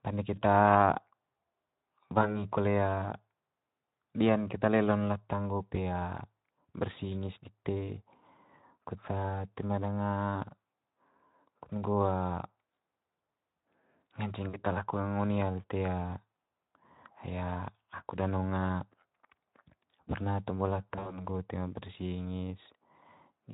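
At 0.35 to 0.42 s, 2.21 to 2.45 s and 14.49 to 14.63 s, the speech briefly smears into a buzzy tone or a coloured noise that fades and then recovers weakly. The longest break comes at 20.91 to 21.27 s, between "perna tombo" and "toe ma", where the stretched sound recurs in patches. This is VoIP packet loss concealed by the speech codec. The decoder extends its last pitch and filter at falling gain to bridge the gaps, which suggest roughly 20 ms losses early, 40 ms at 14.49 s, and about 100 ms spread over 160 ms near the end. It then needs time to rebuild, all through the Speex codec's lightly coloured sound.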